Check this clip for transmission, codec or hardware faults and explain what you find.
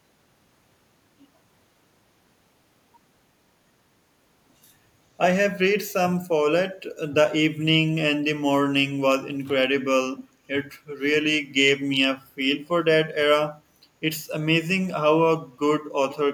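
One fault is present. At 16.1 to 16.17 s there is an echo leak. A faint copy of the speech returns 0.48 s late, about 20 dB down. A far-end echo canceller likely missed loudspeaker sound picked up by its microphone.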